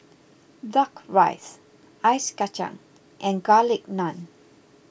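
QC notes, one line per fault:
No faults found in this speech recording. Nothing was heard that calls for a note.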